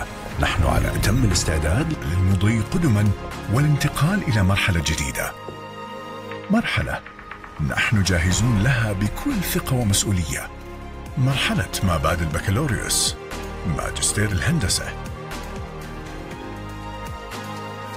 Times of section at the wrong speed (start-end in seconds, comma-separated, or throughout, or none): none